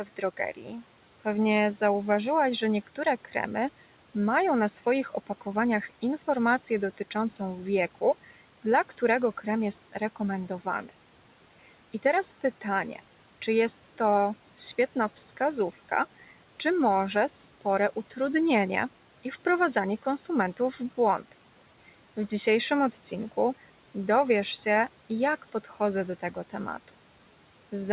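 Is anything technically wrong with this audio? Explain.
Yes. The noise suppressor cut speech twice: from 0.04 to 0.39 s, and from 0.55 to 0.84 s just before "pewnie zauważyłaś że". It mistook quiet speech for noise and pulled it down by about 11 dB, so those bits sound swallowed and faint.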